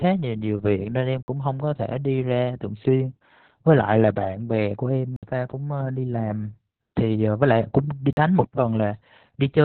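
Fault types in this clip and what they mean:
Opus voice compression: The speech went through Opus in its SILK linear-prediction mode at a very low rate, consistent with roughly 8 kbps narrowband coding. Nothing survives above 4.3 kHz, so the speech sounds muffled, hoarse and slightly robotic from the crude excitation coding.
Block of digital silence: Three times the sound drops to silence with no fade. The holes at 1.23 s (54 ms), 5.16 s (64 ms) and 8.13 s (43 ms, 2048 samples) are heard as short dropouts.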